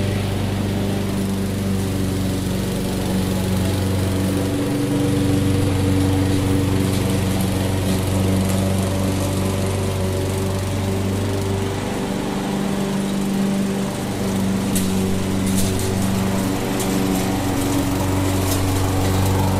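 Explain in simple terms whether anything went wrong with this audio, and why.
Nothing went wrong here; the audio runs from beginning to end without any glitch or interruption you'd need to worry about.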